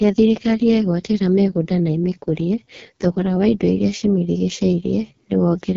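From start to end, the speech carries heavy AMR wideband (HD Voice) codec damage. It sounds rough and raspy, which points to the lowest 6.6 kbit/s rate. Nothing is heard above 7.6 kHz.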